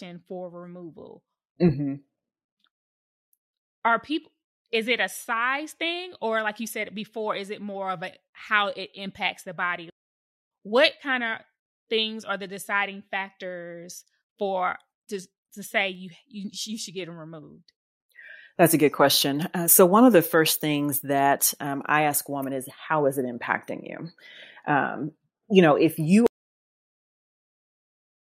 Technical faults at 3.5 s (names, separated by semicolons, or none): none